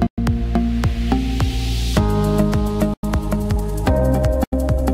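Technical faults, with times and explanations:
3.00–4.93 s, time-stretched section: the pace jumps to about 1.54 times faster while pitch holds, sounding rushed, likely from software dropping short slices to fit a length.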